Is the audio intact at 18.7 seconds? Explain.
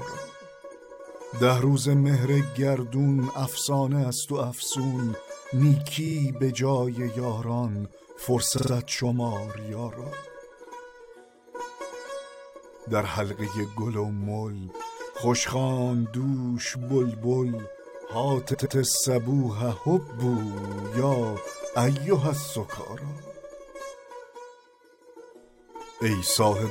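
No, there's a repeated-frames stutter from 18.53 to 18.76 s: a 116 ms block of compressed audio plays twice more, adding 232 ms.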